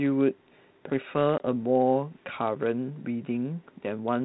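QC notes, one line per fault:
1.38 to 1.47 s, packet loss on an ADPCM call: about 20 ms of the speech drops out, roughly a single packet, and is filled with silence. On the waveform there is a flat, hard-edged gap, and on the spectrogram a clean vertical blank band below the 4 kHz ceiling of the 32 kbit/s G.726 channel. When the speech resumes, the decoder's adaptive predictor and step size no longer match the sender's. This produces brief, slight distortion until it re-tracks by 1.47 s.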